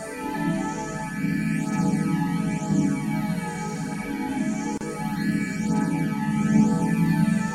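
At 4.78 s the sound drops out until 4.81 s, a hole of about 34 ms. This is a gap at a join of encoded pieces: two separately encoded segments were spliced without trimming, so the encoder's start-up delay and last-frame padding remain as silence. Unlike a dropout from lost data, nothing is skipped. The sound resumes exactly where it left off, and both edges are softened by the codec.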